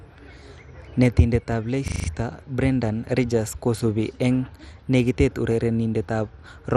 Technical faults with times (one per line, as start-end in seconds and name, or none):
0.00-6.76 MP2 compression
1.88-2.08 system hang loop